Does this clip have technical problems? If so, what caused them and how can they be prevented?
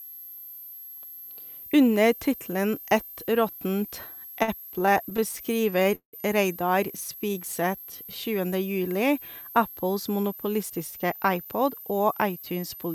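Yes, there are four.

A switching supply whistle runs through the whole clip. It is a thin, high whistle that wanders between about 12.1 and 12.4 kHz, sitting about 20 dB below the speech. A switching power supply running in an audible burst mode, or two supplies beating against each other, puts that tone into the audio path. On a spectrogram it appears as a faint, slightly wavering horizontal line near the top of the band, present in both speech and pauses. Better power filtering, shielding, or a supply that switches well above the audible range would prevent it.

Repeated stalls (stutter) occur between 4.15 and 6.15 s. Across that span the audio halts about two dozen times and resumes. Packets were arriving late or more slowly than they were played, so the jitter buffer kept running dry, and the receiver stretched the last sound each time until more data came. In total about 455 ms is filled this way, roughly a quarter of the span, and the longest hold lasts 178 ms. 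Nothing is actually lost, but the speech drags and stammers. A waveform shows repeated, smeared copies of the preceding cycles at each stall, and a spectrogram shows short frozen stretches where the harmonics run flat instead of moving. A steadier network path or a larger jitter buffer would prevent it.

Jitter buffer slow-down follows from 6.91 to 8.17 s. The receiver was rebuilding its reserve by repeating single pitch periods and slivers of pauses, which adds 174 ms. The speech plays at about 87% speed with its pitch unchanged, so sounds are drawn out, with a faint warble in places. On a spectrogram, syllables look horizontally stretched while the harmonic spacing stays the same. Provisioning enough buffer depth in advance would avoid this catch-up stretching.

Jitter buffer speed-up appears from 10.00 to 12.59 s. Here the buffer held more audio than its target, likely after a batch of delayed packets arrived together. 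To shed the excess, the receiver cut out short pieces of one or a few pitch periods, removing around 0.3 s in total. The speech runs at about 110% speed at the same pitch and sounds hurried. A spectrogram shows syllables compressed in time with unchanged harmonic spacing, and the waveform has small splice points where periods were dropped. Smoother packet delivery, which avoids bursts, would prevent it.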